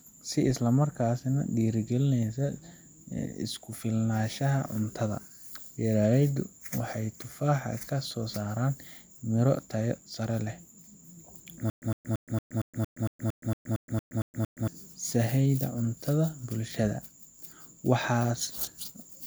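From 11.7 to 14.68 s the speech breaks into a stutter with silent gaps: a 109 ms fragment repeats 13 times, each followed by about 120 ms of digital silence, every 229 ms, before "sahayda cunto". A stalled stream replaying its last buffer is the likely cause.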